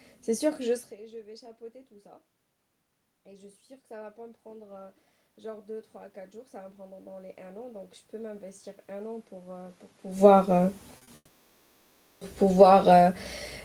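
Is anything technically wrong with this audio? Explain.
Yes, there are a few problems, mostly in the back half of the clip.

From 3.24 to 10.81 s there's automatic gain rising. The speech level at the mic drops by about 20 dB, partly from the talker easing away, and the AGC slowly pushes about 14 dB back up, so the room noise swells along with the speech.

At 10.97 and 11.03 s there are two short concealed packet losses, each about 40 ms. The receiver patched them by extending the previous sound, which you hear as a quick smear or wobble.

From 11.15 to 12.23 s the sound stretches into a fading buzz for about a second, then goes briefly silent before audio resumes with that stretch missing. That's likely a long network dropout.

From 12.46 s to the end there's automatic gain falling. The gain eases back down after the jump, so the speech and the background sink together.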